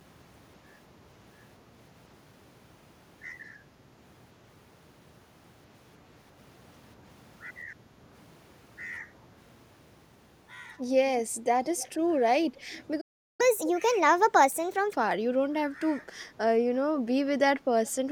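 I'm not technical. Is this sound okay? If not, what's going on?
No. At 11.77, 12.74 and 17.86 seconds there is echo leak: a faint copy of the speech returns about 0.22 seconds later. It is a distinct repeat rather than room ringing, likely from a loudspeaker whose echo cancelling missed some sound. At 13.00 seconds a playback stall cuts the sound off mid-flow for about 0.38 seconds. That is a gap of silence, not a natural pause, likely because the player ran short of data. From 13.41 to 14.93 seconds comes catch-up at higher speed. The audio runs 1.25 times faster to recover lost time, and the pitch rises too, so it sounds squeaky rather than simply hurried.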